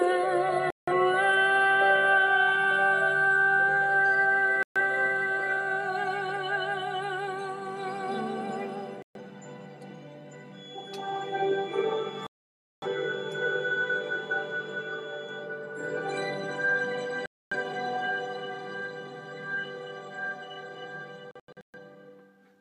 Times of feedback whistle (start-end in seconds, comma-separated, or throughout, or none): 10.49-15.51